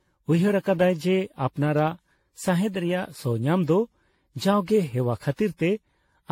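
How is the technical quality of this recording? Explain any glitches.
The recording is degraded throughout by generation loss. Across the whole clip the speech sounds swirly, smeared and hollow, with blurred consonant attacks and nothing above 16.6 kHz. The likely cause is that the audio was decoded and re-encoded around seven times with AAC-LC at settings that point to 64 kbit/s. Each pass quantises on a shifted frame grid, so noise and spectral gaps pile up. A single 64 kbit/s encode would sound cleaner than this.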